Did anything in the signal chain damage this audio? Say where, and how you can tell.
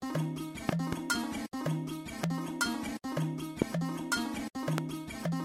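Yes. Loud pops, likely from analogue wiring or a switch: a pair at 0.69–0.95 s, then single ones at 2.24–2.26, 3.62–3.64 and 4.78–4.80 s, roughly 25 dB above the sound, which continues underneath. They appear as tall waveform spikes and full-band vertical spectrogram stripes.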